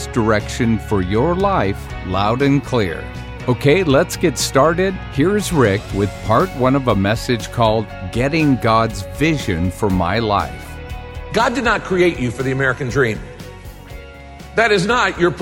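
No technical faults can be heard anywhere in this recording; the signal stays intact and continuous throughout.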